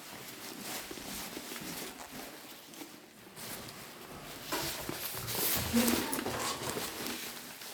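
A recording of sounds with two spots where chunks play out of order. A 40 ms chunk was delivered late and played after the chunks that should have followed it, once two chunks late at 0.92 to 1.04 s and once one chunk late at 2.48 to 2.56 s. Nothing is missing, but each spot briefly sounds jumbled, with three hard joins around every misplaced chunk.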